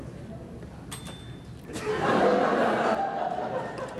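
From 2.95 s to 3.98 s the audio drops abruptly by about 6 dB, likely one channel dropping out before a mono sum. Unlike a plain gain dip or fade, the step is instant.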